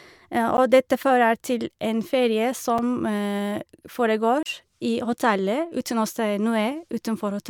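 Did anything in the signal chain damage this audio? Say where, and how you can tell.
Yes. Blocks of digital silence from the driver or buffer stage hit the speech at 0.57 s and 2.78 s as ticks, and from 4.43 to 4.46 s as a 30 ms hole. Each cuts out without a fade. The 11.6 ms gap fits an unfilled 512-sample buffer.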